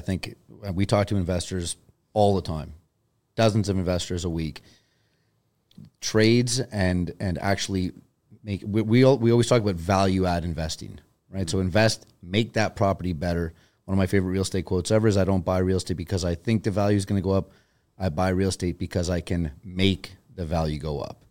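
Nothing in the speech stood out as a technical problem on listening.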